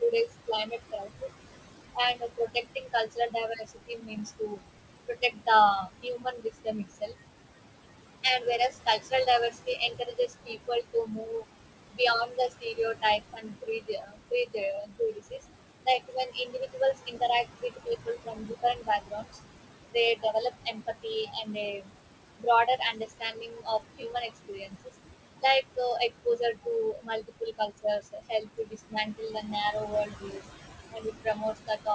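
Throughout, noise suppressor artifacts: the background is pulled down by about 20 dB frame by frame, so the room noise, about 9 dB under the speech, dips and wells up. The suppressor also mistakes speech for noise, so there is speech cut by the noise suppressor from 0.01 to 1.24 s (dips of up to about 17 dB, under half a second in total), then from 1.94 to 19.38 s and from 19.91 to 31.87 s (dips of up to about 22 dB, roughly seven and five seconds affected). Soft consonants and word endings come out swallowed or faint.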